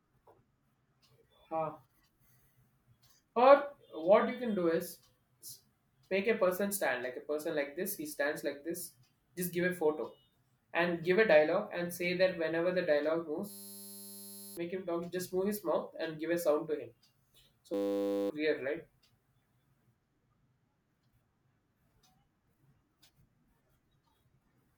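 A system hang loop runs from 13.5 to 14.57 s and again from 17.74 to 18.3 s in this speech clip. Each time, the system stalled while the sound hardware kept replaying the same 10 ms stretch of its ring buffer. That tight loop sounds like a steady buzz at 100 Hz, and it stands in for the speech that should have played. About a second of audio is lost in the first hang and about half a second in the second.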